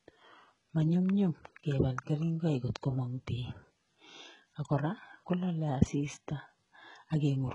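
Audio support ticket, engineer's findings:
HE-AAC compression, throughout the speech. Treble gritty and metallic, s sounds lispy, harmonics misaligned above the crossover, nothing above 11.1 kHz. Likely component: HE-AAC encoder at a very low bitrate, around 12 kbps, coding only the lower band and rebuilding treble by spectral band replication with a coarse envelope. Heavy damage.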